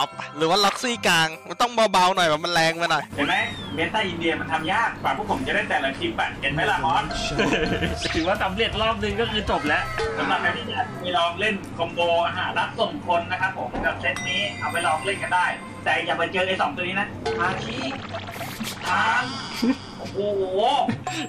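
No technical faults occur anywhere in the audio, so there is nothing to describe in time order.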